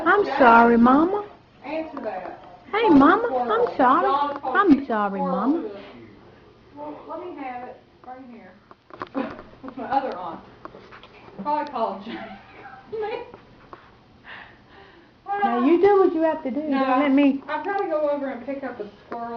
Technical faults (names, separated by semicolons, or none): adaptive stream starting at a low bitrate